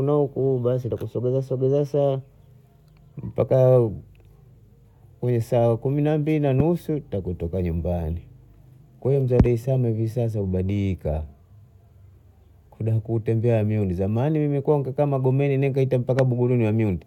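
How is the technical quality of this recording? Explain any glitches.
Two loud pops break into this speech recording. The first comes at 6.60–6.62 s, between "kumi na mbili na" and "takutoka nyumbani", and the second at 16.19–16.21 s. Each is a single sharp thump peaking roughly 15 dB above the speech. The likely cause is a brief voltage pulse, from a plug, switch, static discharge or driver glitch, added to the signal and shaped by the circuits that follow. Unlike a dropout or an edit glitch, the speech keeps running underneath each pop without a gap.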